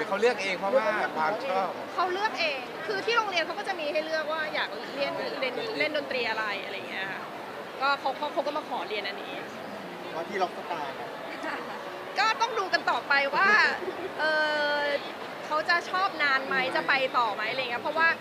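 Nothing technically wrong can be heard in this audio. There are no faults to point to at any time in it.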